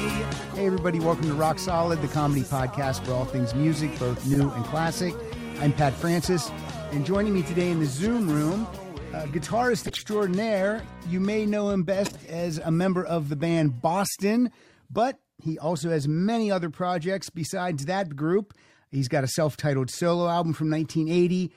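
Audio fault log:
4.33–4.36 s, 9.85–10.02 s, 12.05–12.18 s: corrupt frame decoded. Damaged compressed frames played anyway throw energy into the wrong frequencies, giving short chirps, squeaks, blips or noise bursts peaking around -10 to -15 dBFS.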